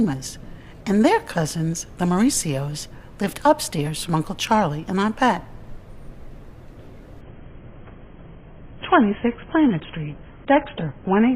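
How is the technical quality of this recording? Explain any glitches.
The recording has one clear glitch, an adaptive stream dropping to a lower bitrate. From 7.21 s to the end, the player switched to a much leaner version of the stream, which fits a fall from roughly 96 to 16 kbit/s, so nothing survives above 3.8 kHz. The sound turns abruptly dull and smeared, with no gap. On a spectrogram, the upper bands cut off sharply at that moment.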